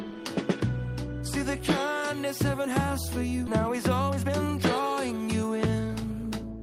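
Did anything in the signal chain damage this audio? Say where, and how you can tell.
Yes. The damage is in the network and jitter buffer stage. At 3.47 s there is a skip ahead. Playback jumps forward with no gap or fill, and about a second of audio is gone. That stretch was dropped while later audio was already queued.

The same stage then applies a jitter buffer speed-up from 3.53 to 5.85 s. The sound runs at about 118% speed with unchanged pitch, so it feels hurried. The buffer held excess audio and trimmed short pitch-period pieces repeatedly, removing about 0.4 s.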